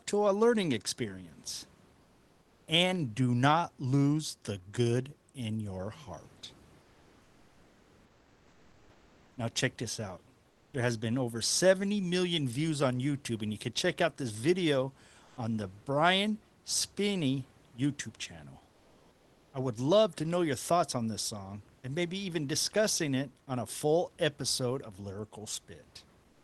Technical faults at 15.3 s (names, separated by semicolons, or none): comfort noise in place of the background